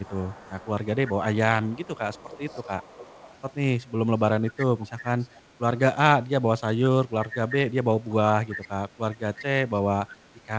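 Echo leak appears at 0.01–0.68 s, 1.63–3.35 s, 4.58–4.66 s, 5.36–5.40 s, 8.49–8.68 s and 9.37–9.45 s. A faint copy of the speech follows 342 ms behind. The likely cause is an echo canceller passing loudspeaker sound back. It is strongest near 4.6 s.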